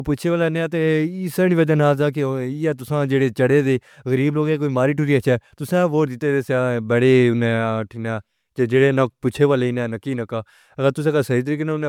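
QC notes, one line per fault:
throughout, generation loss: The speech has a swirly, smeared quality with a hollow, phasey tone and softened consonant attacks, and nothing reaches above 20 kHz. It sounds more degraded than a single MP3 encode at a moderate bitrate would explain. The likely cause is repeated MP3 decoding and re-encoding, around seven passes at roughly 145 kbit/s, with each pass quantising on a shifted frame grid so noise and spectral holes accumulate.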